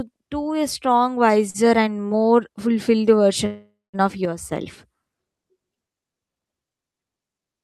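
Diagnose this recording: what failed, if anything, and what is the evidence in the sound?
At 1.50 to 1.56 s there's a short stall from a late packet, a network-side hiccup. A packet missed its slot, the jitter buffer ran dry, and the receiver stretched the last sound for about 43 ms before carrying on. Nothing's lost, but that syllable hangs slightly too long.

From 3.46 to 3.96 s you get a call audio freeze. The sound turns into a fading buzz, drops to silence for roughly the last 190 ms, then resumes exactly where it stopped. That's a 474 ms gap inserted, most likely from packets held up in the network emptying the jitter buffer.

At 4.25 s the level drops by about 6 dB in one step, speech and background together, and it snaps back at 4.52 s. That's a sudden gain jump, likely a digital gain setting applied in the call processing stage without a ramp.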